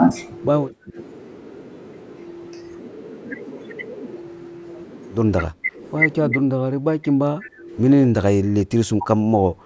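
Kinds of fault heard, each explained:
Speech suppressed in double talk: the speech sinks by roughly 20 to 25 dB in short stretches at 0.71–0.97, 5.48–5.81, 6.29–6.51 and 6.72–7.71 s, and from 8.42 s to the end. The likely cause is an echo canceller that heard the far side talking at the same moment, mistook this talker for echo and turned it down. On a waveform the envelope pinches abruptly inward; on a spectrogram those spans fade to faint traces.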